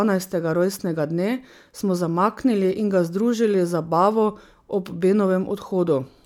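No technical faults can be heard anywhere in this speech recording. Nothing in it breaks off, jumps or distorts at any point.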